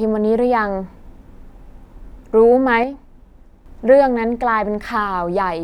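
At 2.84 s the speech drops abruptly in level, by about 6 dB. It stays quieter for roughly 0.8 s, then snaps back at 3.66 s. The change is a clean step, not a fade. This is a case of one channel dropping out. One side of a stereo feed was likely lost for that stretch. Once both sides are summed to mono, content shared by the channels falls by half. Anything carried only on the lost side vanishes.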